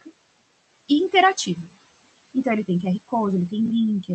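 Noise suppressor artifacts run throughout: the room noise, about 15 dB below the speech, is pulled down by about 19 dB between phrases, then rises under speech.

Chunks out of order occur at 3.66 to 3.70 s: a 20 ms piece of audio plays one chunk late, after the piece that should follow it, giving a brief jumbled moment.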